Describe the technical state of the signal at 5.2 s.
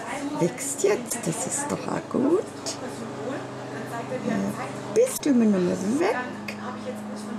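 At 5.2 s the signal is inside a burst of damaged data in a compressed stream, running from about 5.14 to 5.20 s, roughly 70 ms. Corrupted bytes in the encoded stream make the decoder misread those frames, lose sync and hunt for the next valid frame header. The result is a short, garbled blip that doesn't belong to the surrounding audio. A plain dropout would leave silence, and a buffer glitch would repeat nearby material.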